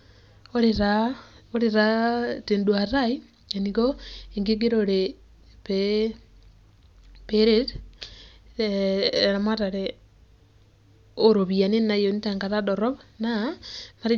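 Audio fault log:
No technical fault can be heard anywhere in the speech recording, with the signal holding steady and continuous from its opening to its close.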